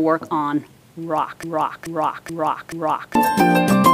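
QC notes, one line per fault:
1.43–3.15 s, broken-record loop: a fragment of about 430 ms plays four times in a row, each repeat identical and butted directly against the last, so the sound stutters mechanically instead of moving forward. The likely cause is a stalled player, encoder or stream that kept re-sending the last piece it held. Whatever audio belonged in those 1.7 seconds never arrives, and normal playback resumes at 3.15 s.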